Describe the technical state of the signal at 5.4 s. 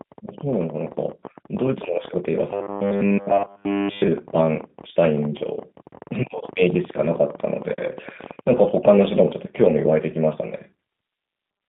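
At 5.39 to 5.45 s, VoIP packet loss concealed by the speech codec fills a short gap. It fits one lost 20 ms packet. The decoder extends its last pitch and filter into a fading buzzy tone or coloured noise, and the sound stays weak briefly afterwards. Underneath, the G.729 codec at 8 kbit/s limits the band to about 150 Hz to 3.7 kHz. It rebuilds speech from a sparse model, so the speech sounds plainly rough and synthetic.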